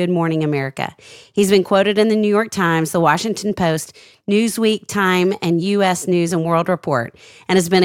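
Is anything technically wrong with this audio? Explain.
No, nothing technically wrong can be heard in this speech clip. Nothing in it points to a problem with how it was captured, processed or played back.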